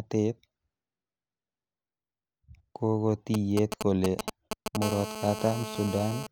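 From 3.34 to 4.77 s, GSM signalling bursts from a nearby 2G phone break into the speech. The audio circuit rectifies the radio pulses, giving a galloping dit-dit-dit of short 217 Hz buzzes, roughly as loud as the speech. A spectrogram shows clustered vertical stripes. The waveform shows grouped spiky packets.

From 4.82 to 6.27 s, the phone's call transmission produces a steady GSM phone buzz. Rectified bursts at 217 Hz make a hard, raspy tone about 9 dB below the speech. On a spectrogram it appears as evenly spaced horizontal harmonic lines, and the waveform carries a continuous comb of pulses.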